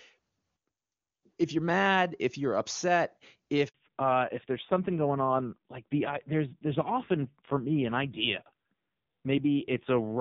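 A speech call in which, right after "mad if you're upset", a handover gap opens from 3.68 to 3.74 s. For those 60 ms no frames arrive while the call switches networks, so the sound dies away quickly and is lost. On the waveform this is a short flat line, and on the spectrogram a thin vertical blank band across all frequencies. From 3.74 s to the end, the call has undergone a fallback to narrowband. Until the gap, the clear HD Voice wideband sound carries energy up toward 7 kHz. Afterwards nothing remains above 4 kHz. The spectrogram shows the upper region going empty along a hard horizontal edge. The speech turns muffled and somewhat raspy, which fits a low-rate narrowband codec around 5.9 kbit/s.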